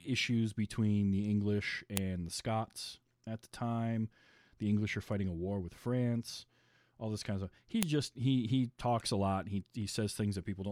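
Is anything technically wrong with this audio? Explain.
Yes. Sharp, loud clicks snap out at 1.97 s and again at 7.83 s, just before "just he he talks". This is a file header played as audio: separate WAV pieces were joined without stripping headers, so those bytes play back as samples.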